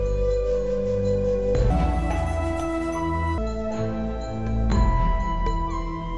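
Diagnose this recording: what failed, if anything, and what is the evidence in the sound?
A wrong sample rate at the playback stage runs the audio 1.5 times fast from 1.70 to 3.38 s, pitch raised about seven semitones, which fits 16 kHz material clocked out at 24 kHz.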